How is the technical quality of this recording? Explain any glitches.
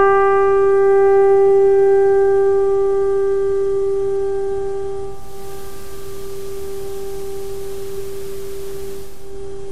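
One glitch affects the second half. Digital radio blending to analogue, 5.03 to 9.40 s: lost digital reception cross-fades over about 0.48 s to FM, bringing hiss roughly 30 dB down at unchanged level, then back.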